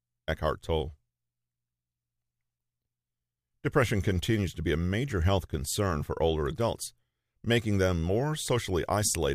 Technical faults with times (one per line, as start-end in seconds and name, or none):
none